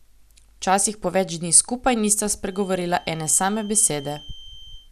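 From 2.42 s to the end, a feedback whistle sits well below the speech: a thin, steady tone near 3.1 kHz that swells and fades slowly in level. It is likely a loudspeaker-to-microphone loop held just short of runaway, so it never swells into a howl, unlike full feedback.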